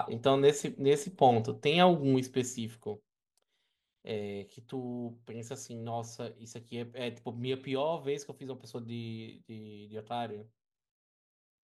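From 2.08 s to 3.33 s, zipper noise rides on the speech as its level drops by roughly 15 dB. The gain falls in 2 dB stairs at roughly seven steps a second, with no smoothing between them, so each jump leaves a small click and the run sounds like a quick ticking zip. A faded level change glides down silently. This one is audibly stepped, and the ticks stop once the level settles.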